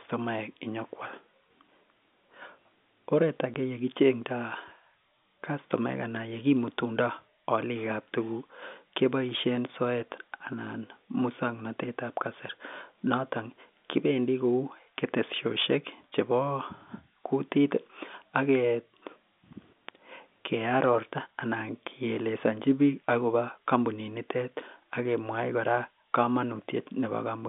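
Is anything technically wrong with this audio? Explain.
Yes. At 3.54 s there is packet loss filled with silence. About 10 ms of speech drops out, fitting one lost packet. The gap has hard edges, over a band-limited G.711 telephone line.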